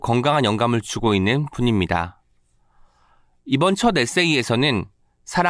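No technical faults are audible.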